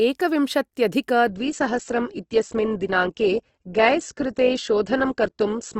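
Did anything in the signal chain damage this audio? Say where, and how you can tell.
Yes, at the network stage: an adaptive stream at a lower bitrate from 1.27 s to the end. The spectrogram abruptly loses everything above 8.1 kHz with no waveform gap, which fits a switch from about 64 to 12 kbit/s Opus.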